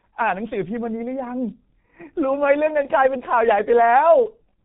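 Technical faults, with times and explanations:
Throughout: G.723.1 codec damage is heavy. Nothing passes above 3.8 kHz, and the slow 30 ms frame updates at roughly 6 kbit/s leave speech muffled, hoarse, with smeared consonants.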